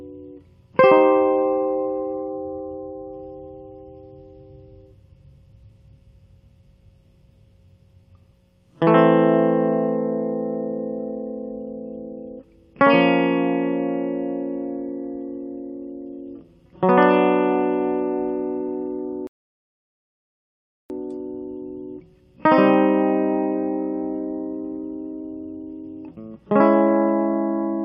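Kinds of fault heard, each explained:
Rebuffering stall: the player exhausted its downloaded audio and halted until more data arrived, so the music drops to silence from 19.27 s to 20.9 s, then picks up exactly where it stopped, with nothing skipped and 1.63 s added to playback.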